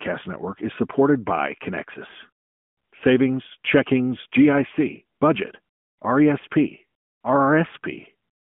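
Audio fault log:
3.48–3.53 s, lost AMR speech frame: a brief dip or warble, as the decoder fills about 20 ms of gap by repeating its last good pitch and vocal tract settings at reduced gain, which fits a single lost frame. On a waveform the envelope sags for that instant. On a spectrogram the narrowband 150 Hz–3.4 kHz harmonics smear into a short static, dimmed band before normal energy returns.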